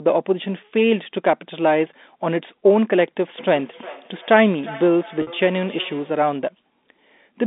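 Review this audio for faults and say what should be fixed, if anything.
Feedback echo between two devices runs from 3.38 to 6.23 s. Speech returns as distinct copies about every 0.4 s, peaking at about 20 dB below the direct speech. A second device in the same room is playing the call aloud, and its microphone feeds that back in. Unlike room reverberation, which decays smoothly, these repeats arrive at a fixed interval. To prevent it, mute the microphone and speaker on one of the two devices, or use headphones.

Packet loss with pitch repetition occurs at 5.22 to 5.27 s, inside the echo stretch. About 50 ms of audio went missing, which fits five 10 ms packets. The receiver filled the gap by repeating the last pitch period, so it sounds like a briefly held, buzzy tone. A plain dropout would leave silence instead. Over the G.711 telephone path the repetition sits within the narrow 200 Hz to 3.7 kHz band. 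To prevent it, stabilise the network path or add jitter buffering and forward error correction.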